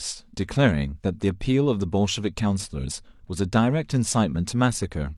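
No technical fault can be heard anywhere in the recording; the speech signal stays steady and intact throughout.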